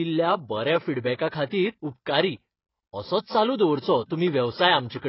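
Throughout the speech the sound is dull and smeared, with nothing above 5.6 kHz and a fizzy warble, likely heavy AAC compression at a bitrate that fits about 16 kbps. The warble sets it apart from a plain low-pass filter. Pre-echo comes at 1.17 s, just before "खातीर उपकारी", and again from 4.06 to 4.11 s, after "असोच चालू दवरचो". A short hiss runs ahead of each sharp onset and blurs it, because quantisation noise from the loud block spills backward in time. That backward-leaking smear is what tells it apart from a click or dropout.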